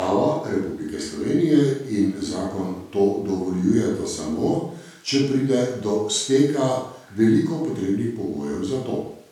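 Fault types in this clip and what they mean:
Nothing to flag here: the speech comes across without any audible faults to list.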